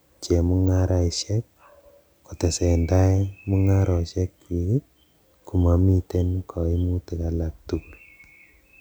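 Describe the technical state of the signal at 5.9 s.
At 5.9 s the audio is intact, with no fault audible at that moment.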